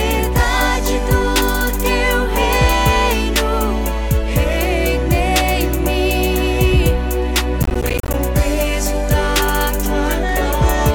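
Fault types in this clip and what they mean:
processor overload crackle: from 7.63 to 8.14 s the processor misses buffer deadlines, leaving some twenty silent gaps that fit roughly 10 ms buffers, heard as gritty crackle.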